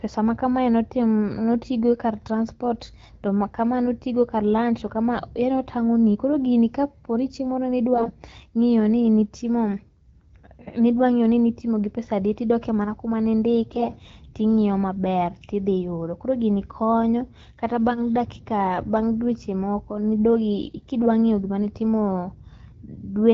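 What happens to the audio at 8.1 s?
Between 7.94 and 8.12 s, right after "gini kaponi chieng' moro" and before "ng'io ni", the clip has AMR bit errors. Around a tenth of the less protected bits in the AMR-WB frames arrive flipped, while the checksum on the critical bits still passes, which fits about nine 20 ms frames being corrupted. The excitation pulses land wrongly and the fine pitch, gain and spectral values drift, so the voice holds its rough pitch and level but turns hoarse, scratchy and gargly.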